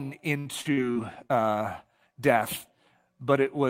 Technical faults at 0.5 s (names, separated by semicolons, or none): repeated packet loss (robotic sound)